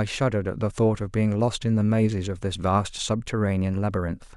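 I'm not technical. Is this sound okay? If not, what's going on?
Yes, this sound is okay, and nothing is going wrong with it.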